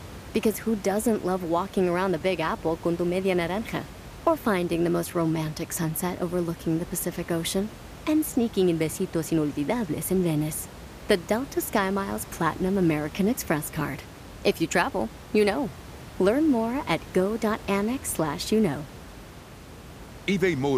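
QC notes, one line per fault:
No faults to note in this speech clip.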